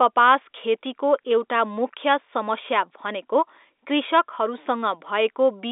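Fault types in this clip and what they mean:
No faults can be heard anywhere in the audio.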